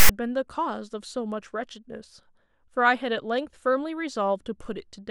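A speech recording opens with a short burst of harsh static. It runs from 0.00 to 0.09 s and starts and stops with hard edges. The fault is file tags played as audio. A block of text metadata at the head of the file has been read as if it were sample data. Text bytes make a loud, buzzy rasp. Their values sit mostly to one side of zero, so the waveform is pushed off centre for that stretch.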